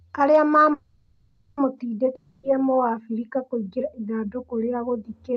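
A call audio freeze runs from 0.73 to 1.59 s: the last sound stretches into a fading buzz for about 0.84 s, then the speech resumes exactly where it stopped, with nothing lost. Late-arriving packets that drained the jitter buffer are the likely cause.

A long network dropout follows from 2.15 to 2.45 s. A brief fading fill covers about 0.28 s of speech that never arrives, and the audio picks up further on at "mũabirika kũingĩra ithandũkũrĩa". Lost packets are likely responsible, and nothing is recovered. Throughout, the speech is band-limited at 8 kHz by the call codec, which sounds like Opus at around 32 kbps.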